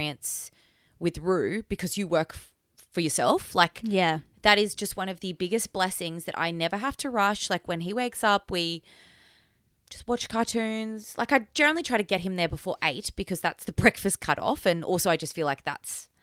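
Nothing here trips any alarm for me, as I can't pick out a single technical fault anywhere in the recording.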